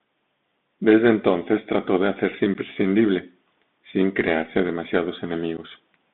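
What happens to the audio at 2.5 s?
Unconcealed Bluetooth headset packet loss occurs at 2.54 s, just after "entonces trató de hacerse". A few packets between headset and phone went missing and nothing was patched in, leaving a hard-edged 11 ms hole in the speech, which returns briefly quieter because the link is CVSD.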